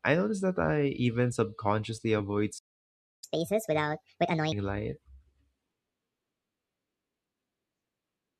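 At 2.58 s the speech just cuts out and stays silent until 3.24 s, a gap of about 0.64 s. That's a playback stall, most likely the player running dry on data or getting its thread blocked, and it picks up again where it left off.

Right after, from 3.24 to 4.52 s, you get catch-up at higher speed: the player chews through its backlog at 1.5 times normal rate by resampling, so the speech sounds hurried and jumps up by around seven semitones before settling back.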